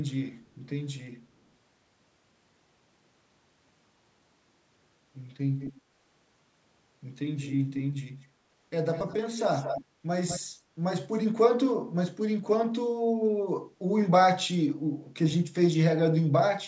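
Speech in which a delayed copy of the voice trails the original by about 0.2 s at 5.6–5.81 s, 8.22–8.26 s, 8.93–9.19 s, 9.38–9.85 s and 10.27–10.4 s. It is loudest around 9.4–9.85 s, only a few dB under the speech, and barely audible at 8.22 s. This echo leak is likely from a far end on loudspeaker whose echo canceller let part of the returning sound through.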